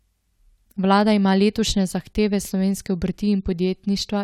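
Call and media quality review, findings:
Nothing stood out on listening to the speech in this recording.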